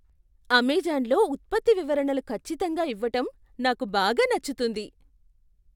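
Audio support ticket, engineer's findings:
Listened through the whole speech clip and nothing stood out, so no faults to log on this one.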